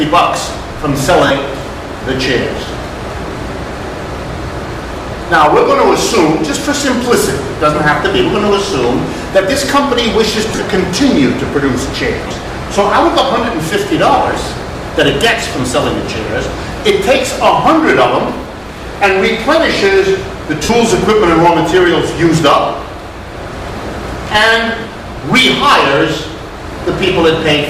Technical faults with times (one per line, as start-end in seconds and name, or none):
1.27-1.30 lost LE Audio frames
10.50-10.64 lost LE Audio frames
12.27-12.31 lost LE Audio frames
20.64-20.69 lost LE Audio frames